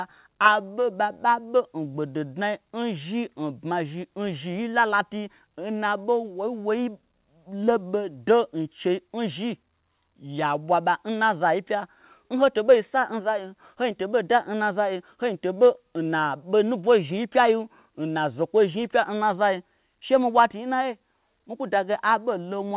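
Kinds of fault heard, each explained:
No faults to list here: the speech just came over a regular call connection using the G.711 A-law codec at 64 kbps, which is why nothing reaches above 4 kHz, and that's simply how that kind of line sounds.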